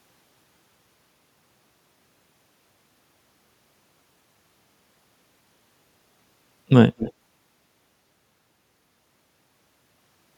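An echo canceller on the far end's loudspeaker side likely failed to remove what its microphone caught, sending it back as an echo leak. From 6.98 to 7.13 s a faint copy of the speech, delayed 200 ms and about 15 dB quieter, trails briefly behind.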